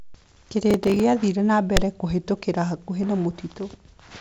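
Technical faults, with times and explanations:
0.71–1.00 s, processor overload crackle: about ten audio buffers in a row arrive late, and each slot replays stale audio with hard edges, consistent with buffers of around 5 ms. This produces gritty tearing. The spectrogram shows dense vertical broadband streaks, and the waveform shows repeated discontinuities.
1.76–1.84 s, phantom power thump: a supply switching on or off on the live input sends a voltage step through the coupling capacitors, producing a deep thud that decays over about 18 ms. The waveform shows one large low-frequency swing, and the spectrogram shows a brief blob of energy at the bottom, beneath the 7.7 kHz top of the G.722 band.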